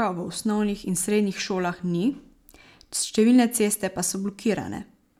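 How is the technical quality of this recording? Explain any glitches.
There's one glitch in this speech recording, a bit error spike at 1.24 s, right before "šolah ni". It's a single sample where a flipped bit in memory or on a digital link made the value leap by a power of two and snap straight back. You hear it as one short, sharp tick, broadband and unrelated to what's being said. It peaks at about -34 dBFS.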